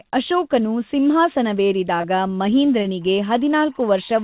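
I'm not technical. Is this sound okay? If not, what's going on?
No. There are two problems.

From 1.98 to 2.05 s there is short concealed packet loss. Two small chunks of the call, each about a fiftieth of a second, arrived too late. The receiver patched the gaps by stretching the sound before them. You hear a brief smear or wobble.

From 3.01 s to the end there is timecode bleed. A timing signal from a nearby cable or track leaked in. It flips between two pitches near 1 kHz and 2 kHz and carries 24 frames of timing a second. It sounds like a faint chirping warble behind the speech.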